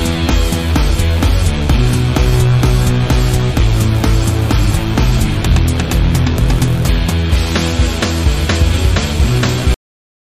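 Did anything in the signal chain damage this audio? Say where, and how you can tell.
Yes: a cut-off end at 9.74 s. The final buffers were never written, so the sound stops mid-event and drops straight to digital silence without decay.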